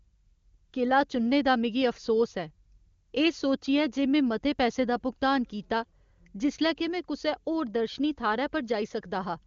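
No technical fault can be heard in the speech; it carries the sound of an AMR wideband (HD Voice) codec working at its top 23.85 kbit/s rate, with the audio band ending at about 7.2 kHz as that codec's wideband design leaves it.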